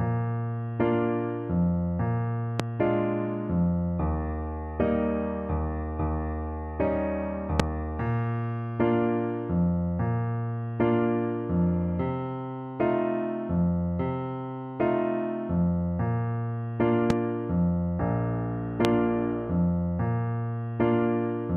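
Loud pops occur at 2.60–2.62 s, 7.60–7.62 s, 17.10–17.13 s and 18.85–18.87 s. Each is a single sharp thump, about 20 dB above the sound (about 25 dB at 7.6 s). Each is likely a voltage pulse from a switch, plug or static. Unlike a dropout, the sound carries on underneath.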